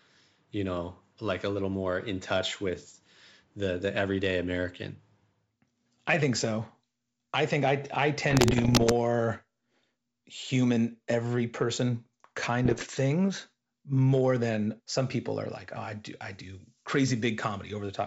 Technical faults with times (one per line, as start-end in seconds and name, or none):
8.31-8.93 bit errors on an ADPCM link
12.65-12.83 bit errors on an ADPCM link